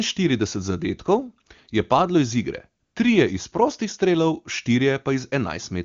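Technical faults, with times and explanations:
2.83 to 2.95 s, AMR comfort noise: for about 120 ms the sending phone judged the talker silent and stopped transmitting speech frames, so the receiver filled the gap with synthetic noise built from a rough estimate of the background's level and spectral shape. The real background drops out and a smooth, steady hiss takes its place, switching in and out abruptly at each edge, while the surrounding wideband speech stays clear and full.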